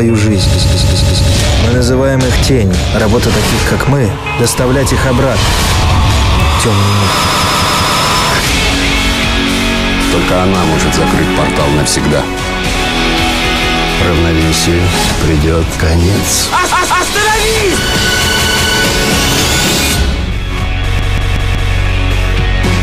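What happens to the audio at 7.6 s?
A repeated buffer is hitting right there, running from about 7.25 to 7.99 s. The playback device didn't get fresh audio in time, so it kept replaying the last chunk it had, a piece about 186 ms long, which fits an 8192-sample buffer. That chunk plays four extra times, each with a hard seam, so you hear a quick, mechanical stutter of the same fragment looping before the audio picks up again, apparently without dropping anything.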